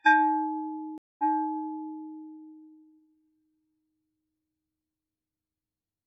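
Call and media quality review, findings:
Stream reconnect, 0.98–1.98 s: about 0.21 s dropout, then audio resumes roughly 0.79 s earlier, replaying material. Player-side connection loss; reconnect with fresh decoder, server resending buffered burst. Onset after gap softened as new decoder starts up.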